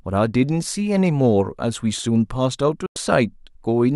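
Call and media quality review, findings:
Digital broadcast dropout at 2.86–2.96 s in the speech. Symptom: audio fades out over 3 ms, then roughly 0.1 s of silence before sound returns. Probable component: receiver decoder muting. Mechanism: frames lost or failing checksum. The 96 ms hole fits three frames of about 32 ms each. Content sent during the gap is unrecoverable.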